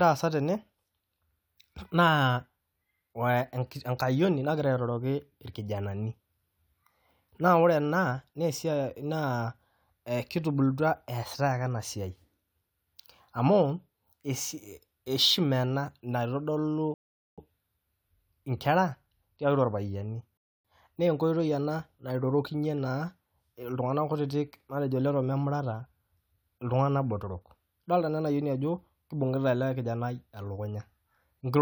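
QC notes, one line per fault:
16.94–17.38 s and 20.37–20.65 s, rebuffering stall: the speech halts into silence twice, for about 0.44 s and then 0.27 s, and each time picks up at exactly the syllable where it broke off. The player ran short of downloaded audio and waited for more to arrive. Unlike a dropout or packet loss, nothing is skipped or garbled. The content stays intact and time is simply inserted.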